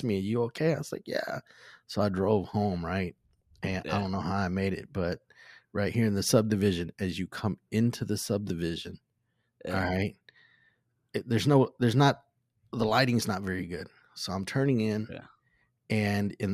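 No technical faults are audible anywhere in the recording.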